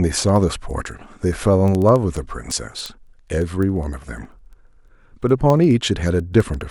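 A speech clip carried over a digital link whose receiving device runs on its own clock, out of step with the sender's by a few hundred parts per million, produces word clock ticks. Each time the two clocks slip past each other a single sample is dropped or repeated, leaving a sharp tick of uneven strength. These recur roughly every 70 ms, around a hundred of them, from 0.15 s to 6.68 s.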